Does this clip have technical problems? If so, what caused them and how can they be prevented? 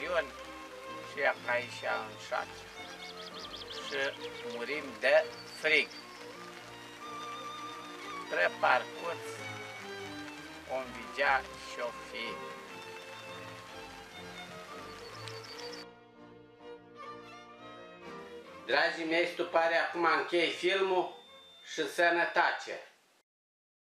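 Yes, a feedback whistle: from 20.34 to 22.85 s a steady 3.6 kHz tone sits well below the sound, swelling and fading slowly, likely from a speaker-to-mic loop just at its feedback point. Cut the monitor level or pull the mic away from the loudspeaker, and notch 3.6 kHz if needed.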